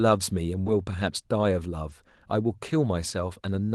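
At 0.61 s there is short concealed packet loss. About 40 ms of the speech arrived too late to decode. The receiver stretched the preceding sound to cover the hole, then blended back. It sounds like a brief smear or wobble, lasting to 0.68 s.

Overlapping the end of that smear, a lost packet rebuilt from error correction fills 0.66 to 0.68 s. A second one sits at 1.90 to 1.92 s. Each 20 ms frame was replayed from a low-rate Opus copy carried in the next packet. There is no gap, but those frames sound rougher and noisier.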